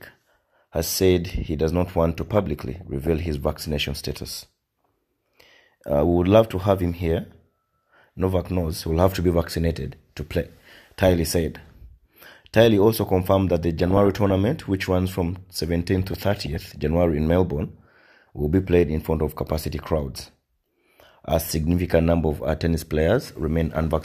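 Short noise blips break over the audio at 2.28 to 3.26 s, 13.79 to 14.36 s, 16.08 to 16.79 s, 20.16 to 20.29 s and 23.70 to 23.84 s. This is DAB burbling: weak reception let bit errors slip past error correction, corrupting samples so individual sub-bands get short blips of noise.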